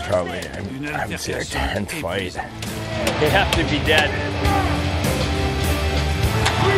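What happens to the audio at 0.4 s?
Nothing goes wrong at 0.4 s; the audio plays through that moment intact, with no dropout, click, glitch or distortion.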